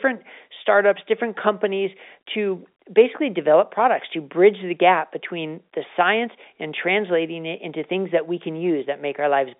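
No technical faults can be heard in this speech.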